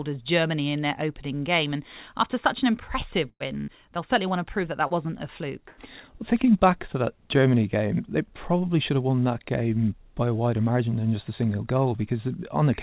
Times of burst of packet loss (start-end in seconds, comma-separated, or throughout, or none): 3.29-3.70, 5.68-5.80